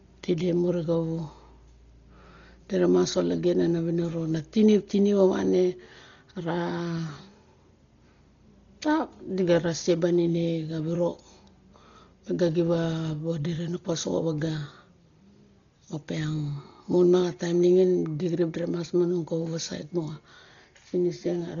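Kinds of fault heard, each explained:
Dolby Digital compression: The speech sounds dull throughout, with nothing above 7 kHz, and a rough, fluttering noise clings to voiced sounds. This heavy damage likely comes from an AC-3 style encoder starved of bits, at a rate that points to around 32 kbps, leaving many frequency lines empty and refilled with dither noise. A plain low-pass filter would only muffle; here the noisy, grainy texture around tones sets it apart.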